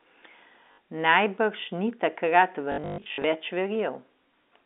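Packet loss with last packet repeated stutters this telephone-band speech at 0.72 to 0.78 s and scattered across 2.72 to 3.24 s (runs up to 120 ms). Replayed packets buzz robotically.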